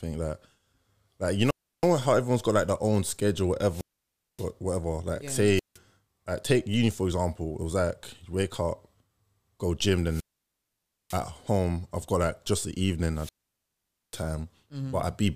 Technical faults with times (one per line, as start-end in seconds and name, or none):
1.42-1.90 wireless microphone squelch dropout
3.67-4.50 wireless microphone squelch dropout
5.54-5.78 wireless microphone squelch dropout
10.06-11.22 wireless microphone squelch dropout
13.13-14.26 wireless microphone squelch dropout